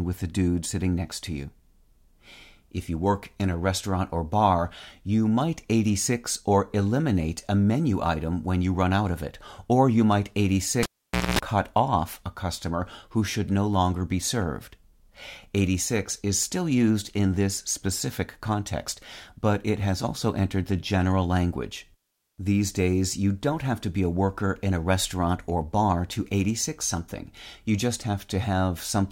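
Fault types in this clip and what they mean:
cable pulled and plugged in: a pop, half a second of near silence, a 230 ms burst of 60 Hz buzz, another pop, as a live cable is reseated.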